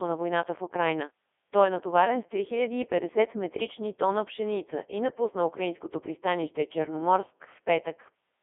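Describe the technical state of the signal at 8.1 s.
At 8.1 s the speech is still passing through the Codec 2 vocoder, which affects the whole clip. The sound is robotic and buzzy. The decoder rebuilds the voice from sine waves using only pitch, voicing, energy and a spectral envelope, so the original waveform is gone. The damage is heavy, even in the 3.2 kbit/s mode. The band runs from about 250 Hz to 3.5 kHz. Nothing is present above 3.7 kHz.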